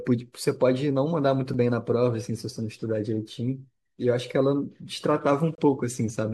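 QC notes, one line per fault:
1.54 s and 5.55–5.58 s, gap between stream segments: two hard-edged dropouts to silence, about 7 ms at 1.54 s and about 28 ms at 5.55 s, spaced 4 s apart to match the segment length. At each boundary the next segment's timestamp starts slightly late, and the player fills the hole with digital silence. The abrupt edges give a tick-like break, and no audio is lost, just delayed by the inserted gap.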